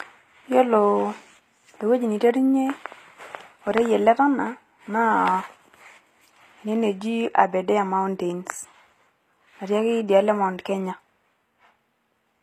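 Speech with plainly audible HE-AAC compression throughout: nothing above 15.4 kHz, and gritty, lispy s sounds, likely from spectral band replication rebuilding the treble at a bitrate near 24 kbps.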